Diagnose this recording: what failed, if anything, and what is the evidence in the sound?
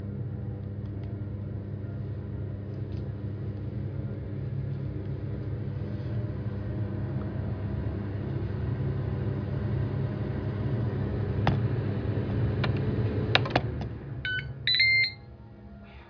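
Nothing failed in this recording, and there is no evidence in the sound of any fault.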